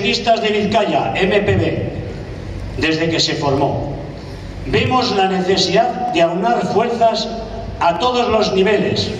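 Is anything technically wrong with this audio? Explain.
Yes. Four sharp clicks at 3.58, 4.87, 6.09 and 7.96 s, most likely dropped samples: a fraction of a millisecond is missing each time, so the waveform steps abruptly between values. Each shows as a thin vertical line across the spectrogram, far too brief to remove any sound.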